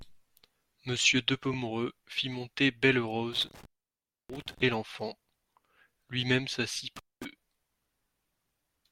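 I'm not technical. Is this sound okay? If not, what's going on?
No, there are two kinds of problem. At 1.53 s there's a tiny stutter from repeated frames: a 20 ms scrap of compressed audio got stored twice, so the player runs that bit again, and you hear a small hiccup as the speech briefly doubles back.

The bigger issue is an intermittent contact, basically a loose cable or plug briefly losing connection. The sound drops out with crackly edges around 3.33 to 4.62 s, silent for about 0.64 s, and again around 6.96 to 7.25 s, for about 0.23 s, leaving just faint hiss in the gaps.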